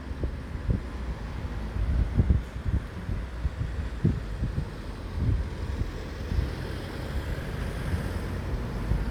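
A recording of everyday sounds, with one fault: frames out of order from 7.41 to 7.61 s. Two neighbouring blocks of about 93 ms each play in swapped order, which fits runs of four frames each being delivered and decoded out of sequence. The result is a brief garbled flutter. Unlike a dropout or a repeat, nothing goes missing or plays twice, and the timing afterwards stays intact.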